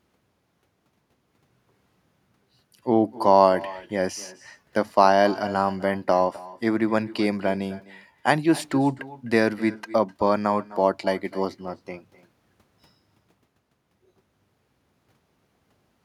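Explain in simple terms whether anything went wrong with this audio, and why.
Something did go wrong: there's echo with no canceller from start to finish. The other end played the call through a loudspeaker, their microphone caught it, and nothing stripped it out, so every bit of speech returns about a third of a second later as a faint, hollow copy.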